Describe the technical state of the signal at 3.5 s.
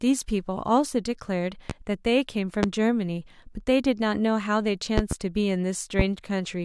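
At 3.5 s the speech signal is intact, with no dropout, distortion, glitch or other technical fault audible at that moment.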